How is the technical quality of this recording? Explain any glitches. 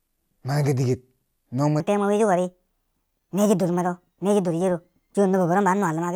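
The recording has one clear problem, covering most of its length. From 1.80 s, right after "no mwe", to the end there's a wrong sample rate: the speech runs 1.38 times too fast and about 5.6 semitones high, which fits 32 kHz audio played back at 44.1 kHz without conversion. The speech sounds squeaky and rushed.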